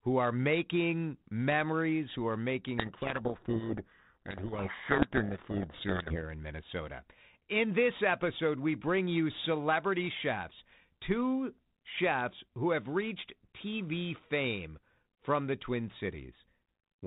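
From 2.78 to 6.20 s, just after "memories who are making", the G.726 decoder reads the code words with their bits in the wrong order, a codec payload misread. Every sample decodes from scrambled differences, so the speech sinks under harsh, rasping distortion until correct reading resumes.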